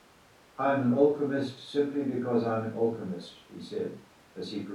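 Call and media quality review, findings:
No findings in this call and media quality review.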